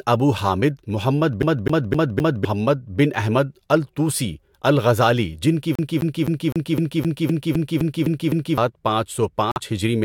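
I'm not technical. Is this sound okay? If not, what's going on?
No. A CD stuck on one turn shows up twice, from 1.42 to 2.45 s and again from 5.75 to 8.58 s. In each stretch the same quarter-second slice of speech, about 0.26 s long, plays over and over with a tiny gap at every jump: four times in the first stretch and eleven in the second. That fast, even stutter comes from a scratch throwing the laser back one track every time the disc comes round.

A Bluetooth dropout cuts the sound out from 9.51 to 9.58 s. When the speech returns, it has moved on by roughly 46 ms, as though it had kept playing through the silence. This is likely a case of audio packets reaching the headphones too late and being thrown away. The size of the gap fits about two lost chunks of audio, and the wireless link simply stayed silent until good data arrived again.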